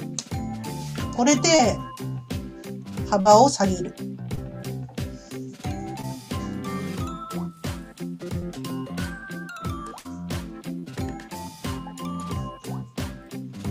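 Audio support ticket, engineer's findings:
Short concealed packet loss at 1.55–1.61 s, 3.21–3.27 s, 4.35–4.39 s, 6.01–6.05 s and 8.39–8.43 s. Brief smears or wobbles. Receiver jitter buffer/decoder concealment: late or lost packets, 20 to 40 ms of audio gone each time, gap patched by extrapolating the preceding sound for about 20 to 40 ms, then crossfaded back into real audio.

Burst of packet loss at 9.99–10.07 s and 10.79–10.85 s. Consecutive packets dropped or arriving too late to play: about 60 ms missing in the first, about 40 ms in the second. Concealment holds the last sound for about 50 ms, decaying into a buzz or fading hiss, then playback resumes further along. Network path probable. Audio between the loss and the resumption is missing.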